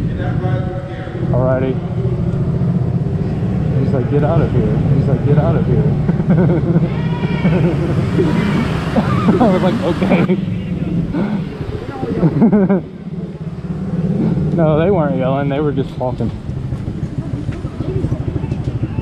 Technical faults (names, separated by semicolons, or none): doubled audio track